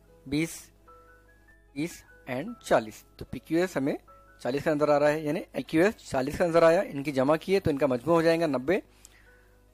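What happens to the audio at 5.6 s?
At 5.58 s the sound jumps abruptly forward with a brief blip. This is a stream segment skipped, likely from a segment that failed to load. Unlike a dropout, nothing goes silent; the programme simply resumes further ahead.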